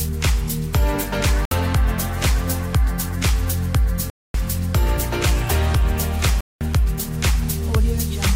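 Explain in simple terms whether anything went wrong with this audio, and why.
Something likely went wrong in the wireless link: chunks of audio didn't reach the headphones in time and were thrown away, which is a Bluetooth dropout. You hear this as three sudden silences, from 1.45 to 1.51 s (about 60 ms), 4.10 to 4.34 s (about 240 ms) and 6.41 to 6.61 s (about 200 ms). After each gap the sound picks up further along, as though it had kept playing during the silence.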